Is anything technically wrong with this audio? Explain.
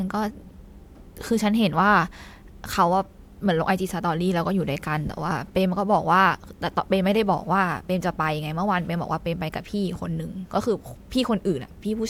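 No, nothing is technically wrong with this audio.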